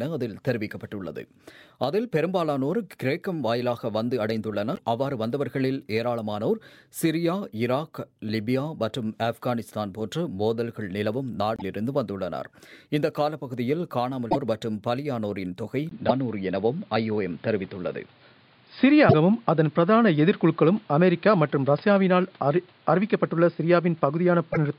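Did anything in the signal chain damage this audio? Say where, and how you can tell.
Yes. At the codec stage, short chirps or noise bursts appear at 4.74, 11.56, 14.30, 16.08, 19.08 and 24.52 s. Each shows as a brief vertical smear on a spectrogram. This is likely a broken MP3 bit reservoir after dropped frames.

At the input stage, a 20 ms gap at 15.89 s is followed by a spectrogram that is empty above 5 kHz, a new noise floor about 35 dB down and a level shift of about 5 dB. This points to an input switched to a poorer device.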